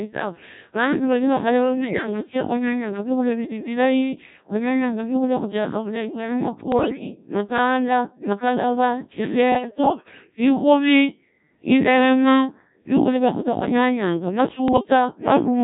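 From the first second to the end, the speech carries the sound of the Codec 2 vocoder, with heavy damage consistent with its very low-rate modes near 1.3 kbit/s. The decoder does not rebuild the original waveform. It resynthesises the voice from sine waves driven by transmitted pitch, voicing, energy and a coarse spectral envelope, so the whole clip sounds robotic and buzzy, with a flattened, synthetic timbre.

On top of that, bit errors on digital voice radio hit the clip in four bursts: 1.85 to 2.07 s, 6.72 to 7.04 s, 9.52 to 10.36 s, and 14.68 to 14.85 s. The first two sound like roughly one bit in ten being corrupted, and the last two sound somewhat lighter. In a codec this sparse, each flipped bit changes the pitch, level, voicing or spectral shape of an entire frame. During these bursts the voice jumps erratically in pitch and loudness, changes tone colour, and breaks into bleeps and warbling gibberish. 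The longest burst, at 9.52 s, spans about 20 frames.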